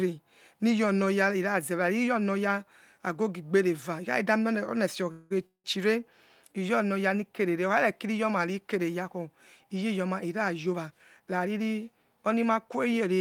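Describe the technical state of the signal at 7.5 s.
At 7.5 s the speech signal is intact, with no audible dropout, distortion, glitch or other technical fault.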